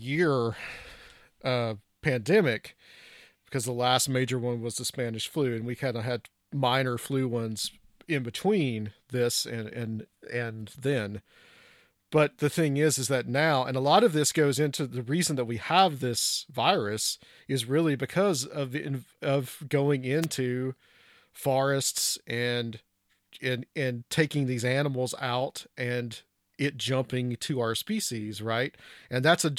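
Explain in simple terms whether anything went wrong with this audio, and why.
A wireless microphone noise hit occurs from 20.22 to 20.26 s, right after "of the of going". The microphone's radio signal briefly faded as reflected copies cancelled each other out, so the receiver's own hiss broke through as a short swish of static over the speech.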